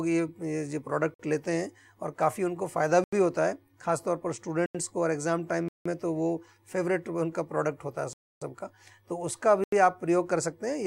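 Blocks of digital silence occur at 1.14 s (about 53 ms), 3.04 s, 4.66 s and 9.64 s (85 ms each), 5.68 s (171 ms) and 8.13 s (284 ms). Zeros replaced the signal, which points to the output buffer not being filled in time. The sound drops straight to nothing and back with no fade. The 85 ms holes fit a 4096-sample buffer at 48 kHz, and the 171 ms one fits two. The longer gaps are heard as clear holes.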